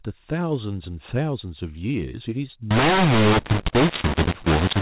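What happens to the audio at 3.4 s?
At 3.4 s the speech is inside a stretch of mu-law and A-law mixed up, running from 2.71 s to the end of the clip. The telephone-band audio was coded with A-law but is being decoded as mu-law, so each 8-bit code maps to the wrong level on the other logarithmic curve. Loudness is scrambled, some samples too large and others too small, making the speech harsh and distorted, and the quietest samples sit well above silence, so pauses fill with noise.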